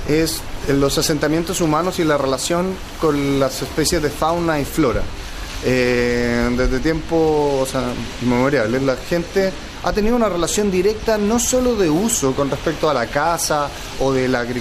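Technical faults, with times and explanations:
No technical faults detected.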